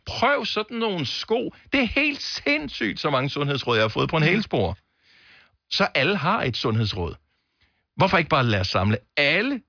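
Nothing in this speech recording stands out as a technical fault, so there's nothing here to flag.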